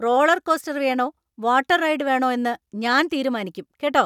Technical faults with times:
none

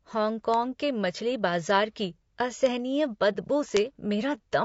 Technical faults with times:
0.00-4.65 low-delay AAC compression
0.54 bit error spike
2.66 bit error spike
3.33-3.36 AAC frame loss with muting
3.77 bit error spike

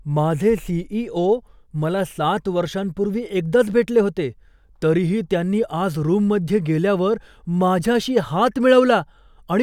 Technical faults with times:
none

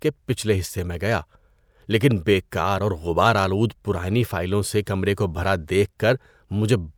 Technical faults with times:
none

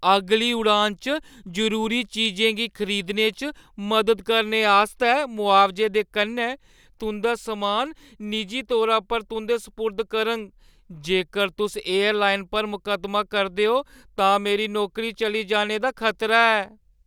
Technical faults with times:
0.11-17.07 clock slip clicks

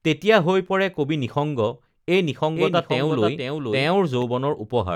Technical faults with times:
2.56-4.22 doubled audio track

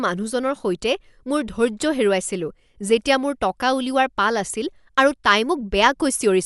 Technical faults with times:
0.00-6.45 Dolby Digital compression

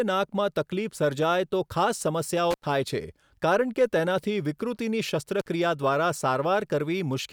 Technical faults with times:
2.51-2.66 intermittent contact
5.40-5.48 intermittent contact

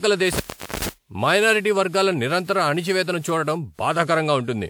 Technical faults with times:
0.00-4.70 generation loss
0.33-0.89 intermittent contact

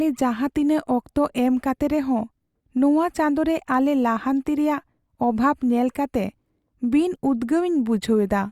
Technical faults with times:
none

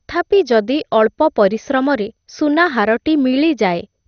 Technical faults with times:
0.00-4.07 MP2 compression

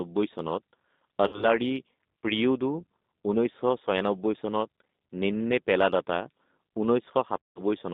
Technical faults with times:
0.00-7.93 G.729 codec
1.27-1.50 VoIP packet loss concealed by the speech codec
7.42-7.61 VoIP packet loss concealed by the speech codec

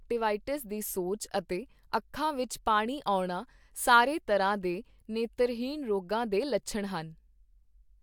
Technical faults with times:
none

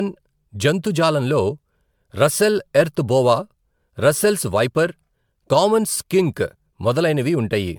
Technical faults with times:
0.00-7.79 generation loss

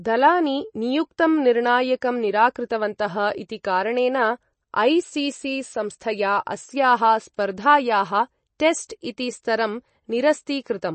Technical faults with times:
0.00-10.95 MP3 compression

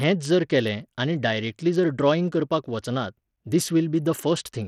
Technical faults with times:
0.00-4.68 Bluetooth SBC compression

